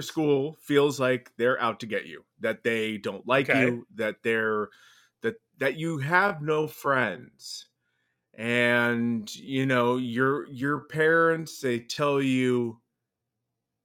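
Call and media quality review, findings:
Time-stretched section, 5.80 s to end of clip at 13.85 s, starting after "that they're that that" and running through "be the better person". Delivery abruptly slows to about 0.64x pace with pitch unchanged; short segments repeated to fill time. Likely cause: length-fitting stretch in the playout or editing stage.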